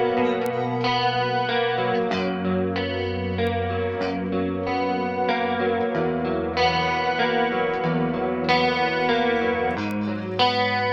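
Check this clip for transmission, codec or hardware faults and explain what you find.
Three isolated bit error spikes, at 0.46 s, 3.47 s and 9.91 s. Each is a single-sample jump to about -8, -20 and -14 dBFS, where one flipped bit leaps the value by a power of two before it snaps back. The result is a dry, broadband tick with no gap or smear, unlike a dropout click.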